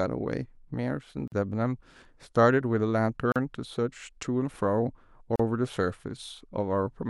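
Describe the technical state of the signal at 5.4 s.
At 5.36 to 5.40 s the speech runs across a gap at a join of encoded pieces. Separately encoded segments were butted together without trimming, so the encoder's start-up delay and the padding on the previous piece's final frame stay in the stream. The result is a dropout of about 38 ms, a short hole of silence with smeared edges, after which the speech resumes exactly where it broke off. Such joins recur every 2.0 s.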